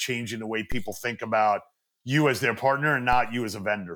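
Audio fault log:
0.72 s and 3.13 s, DC step: the waveform's zero line jumps by about -20 dBFS, after "the way" and after "you as their partner", then bleeds away through a 2 Hz high-pass. Each sudden shift is heard as a low thump while the speech carries on unchanged.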